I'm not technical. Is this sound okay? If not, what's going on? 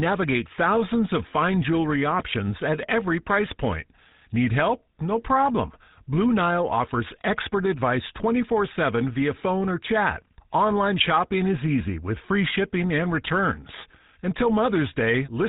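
No. All the way through, the speech sounds buzzy and gravelly, boxed-in and dull, with no crisp top end. That's the GSM full-rate codec, an early mobile-phone voice system that rebuilds the voice from a simple buzzing model and throws away everything above 4 kHz.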